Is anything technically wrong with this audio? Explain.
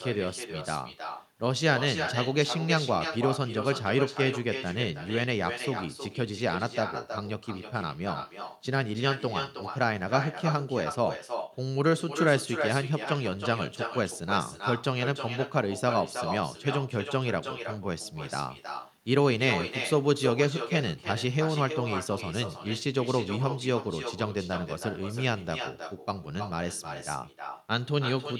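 Yes. Throughout the speech there's echo with no canceller: the far end's loudspeaker feeds its mic, sending everything back roughly 300 ms later as a thinner copy about 8 dB down.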